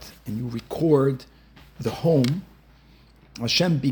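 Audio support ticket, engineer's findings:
No audible faults found; nothing to flag.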